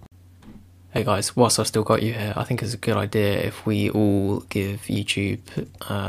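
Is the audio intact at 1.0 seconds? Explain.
No. At 0.98 s there is an abrupt jump in the sound, likely a dropped buffer (overrun): roughly 20 ms of samples were overwritten before being read, so the two sides join directly. Unlike an underrun, no silent gap separates them.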